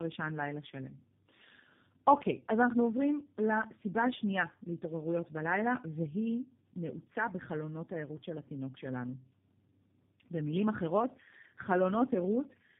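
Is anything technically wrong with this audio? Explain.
Yes. Throughout, this speech shows tandem speech coding: two low-rate speech codecs in a row, likely AMR-NB then G.729A, each recoding the previous one's damage. Nothing above 3.7 kHz remains, and the compounded roughness and warble exceed what a single codec produces.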